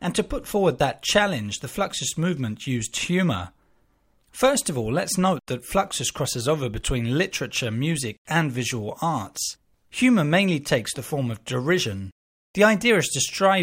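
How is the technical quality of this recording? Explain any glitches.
Nothing in the recording stands out as a technical glitch, so there's nothing here to explain.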